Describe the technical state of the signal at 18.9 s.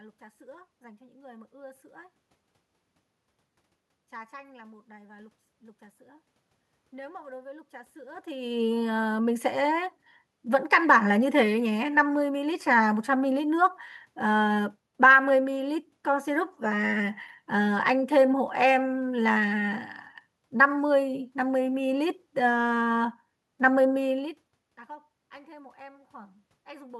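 At 18.9 s the signal is intact, with no dropout, distortion or other system fault in the speech, only the background noise of the room it was recorded in.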